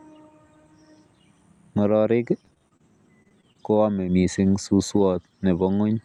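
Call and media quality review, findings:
Repeated packet loss (robotic sound), 2.45–2.83 s: choppy speech. Several short holes, longest 26 ms, about a third of the span patched by extending the previous sound. Likely network jitter or loss feeding the decoder's concealment. Repeats at 3.23–3.57 s, longest hole 21 ms, about a quarter concealed. Unlike a single dropout or plain silence gaps, the holes cluster closely and are filled with smeared continuation, which produces the robotic texture.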